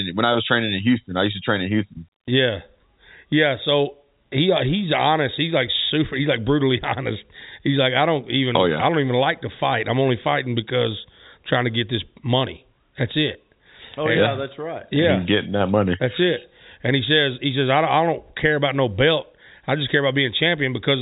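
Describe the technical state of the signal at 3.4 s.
At 3.4 s the speech is intact, carried cleanly through its G.711 telephone coding with nothing beyond that path's usual band limit and faint quantisation noise to be heard.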